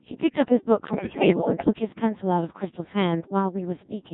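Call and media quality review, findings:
Codec 2 vocoder, whole clip. Speech reduced to pitch, voicing, energy and a coarse spectral envelope, then resynthesised from sine waves, so the original waveform is gone. Result: robotic, buzzy speech with heavy damage, consistent with a 1.6 kbit/s mode.

Bit errors on digital voice radio, 0.88 to 1.70 s. A high error rate, on the order of one bit in ten, corrupts frame parameters across this stretch. Pitch, level, voicing and tone colour jump from frame to frame. Heard as bleeps, warbles and robotic gibberish.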